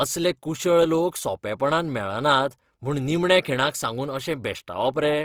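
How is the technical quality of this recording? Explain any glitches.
The recording's technical quality is held back by one fault that runs through the whole clip.

Opus compression, throughout: the speech sounds rough and grainy, likely from music-mode coding at a rate that fits about 24 kbps, which fills starved bands with folded or noisy energy. Bandwidth still extends to 20.3 kHz.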